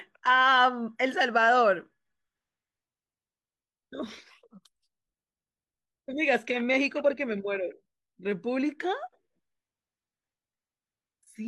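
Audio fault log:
No faults detected anywhere in the speech recording.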